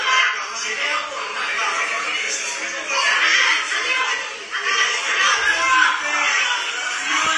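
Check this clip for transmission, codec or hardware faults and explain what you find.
One codec fault runs through the whole clip. Throughout, nothing is present above 11.4 kHz and the texture is dull, smeared and fizzy. The likely cause is AAC compression: an AAC-LC encoder at a bitrate near 32 kbps lowers its cut-off and coarsely quantises the remaining frequency lines against a hearing model, discarding detail it judges inaudible.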